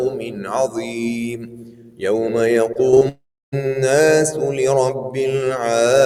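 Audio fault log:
Throughout: noise suppressor applied to music or sounds. A speech-tuned suppressor treats steady content as noise, so the level pumps by about 10 dB as held sound sinks.
0.10–0.52 s and 0.68–2.02 s: sound cut by the noise suppressor. Sustained and decaying material is pulled down by about 10 dB and 11 dB respectively, while sudden onsets mostly pass through.
2.73–3.03 s: repeated packet loss (robotic sound). Four short holes, the longest 23 ms, are patched by extending the previous sound, leaving about a quarter of this stretch choppy.
3.09–3.54 s: long network dropout. The last sound drags on as a fading buzz or hiss, then about 0.32 s of silence follows before audio resumes, likely because nothing arrived over the network for nearly half a second.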